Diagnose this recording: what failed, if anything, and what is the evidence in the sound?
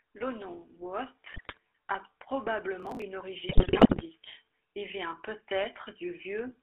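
Codec stage: the GSM full-rate codec colours the whole clip, giving the speech a buzzy, gravelly roughness with nothing above 3.5 kHz, consistent with 13 kbps GSM.

Network stage: GSM bit errors at 1.32–1.58 s and 3.49–4.04 s corrupt decoder parameters frame by frame, breaking the speech into squawks, pops and gargling.

Driver or buffer stage: processor overload crackle from 2.80 to 3.02 s. About twenty buffers of roughly 5 ms each were skipped, leaving hard-edged gaps heard as gritty tearing.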